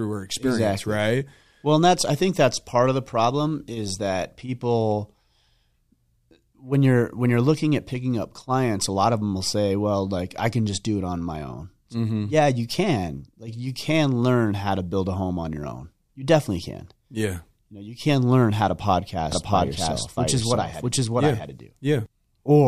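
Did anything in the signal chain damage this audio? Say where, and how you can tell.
Yes: a doubled audio track from 19.32 s to 22.06 s. Over that stretch the speech is heard twice, with a second full-band copy trailing by roughly 0.7 s at much the same level as the original. The copy carries no decay or room colour, and it cuts in and out abruptly, which rules out acoustic echo. The likely cause is a routing or capture stage picking the signal up a second time through a slower path.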